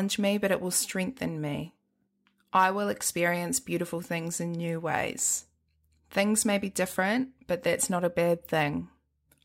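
Speech recording with no technical fault to point to anywhere in it. At no moment does the sound break, shift or change character.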